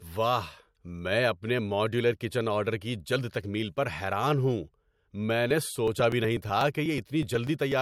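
From 5.51 s to 7.72 s the speech is broken by periodic USB or driver dropouts. Every 0.123 s, roughly eight times a second, a stall on the USB bus or in the audio driver causes a short stretch of samples, around 2 ms, to be skipped outright rather than replaced with silence. The result is a train of around twenty evenly spaced ticks that sound only where the voice is present.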